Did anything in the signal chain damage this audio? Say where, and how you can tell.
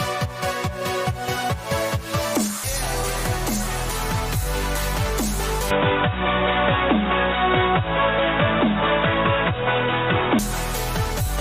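Yes. There's a skip ahead at 2.63 to 2.65 s: about 0.7 s of audio just vanishes and the two sides butt together with no gap. That's the network or jitter buffer, which threw away a queued stretch and resynced forward.

From 5.71 s to 10.39 s the sound goes dull and boxy, with nothing above 3.8 kHz and a new noise floor some 35 dB down, but no level jump or dropout. That's likely an input switched to a poorer device, such as a headset's call profile.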